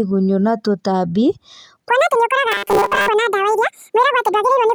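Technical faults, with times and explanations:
1.89 s to the end, section at the wrong speed: From here the speech runs at twice its recorded speed. Pitch and tempo jump together, so the voice turns high and hurried. The rise sounds like roughly ten semitones, close to an octave. Syllables are squeezed and pass too fast. The likely cause is playback or editing tied to the wrong clock, which plays the samples out at double rate. The change is abrupt, with no ramp between speeds.
2.52 to 3.09 s, robotic sound from repeated short buffers: Inside the fast section, the voice collapses into a rigid metallic buzz near 200 Hz. It still follows the rough shape of the speech. A fixed tone at 200 Hz fits one short chunk of about 5 ms being played over and over. Most of the real audio in this stretch is skipped and replaced by these repeats. The likely cause is new audio arriving too seldom, with the software filling the gaps from the last buffer.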